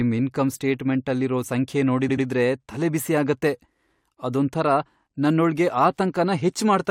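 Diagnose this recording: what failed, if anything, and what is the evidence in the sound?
The failure is at the codec or storage stage: repeated frames. Just after "ಇನ್ಕಮ್ ಸ್ಟೇಟ್ಮೆಂಟಲ್ಲಿರೋ ಸಂಖ್ಯೆ", from 2.08 to 2.25 s, the speech stutters as an 85.3 ms block plays two extra times before the clip continues into "ತಲೆಬಿಸಿ ಆಗತ್ತೆ". The block length fits a run of about four compressed frames. The decoder received that run more than once and rendered it faithfully each time, which makes the recording 170.7 ms longer than the original.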